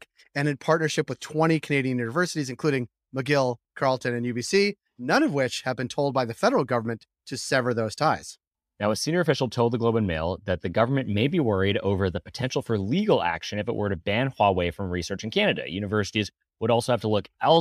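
No technical faults can be heard anywhere in the recording.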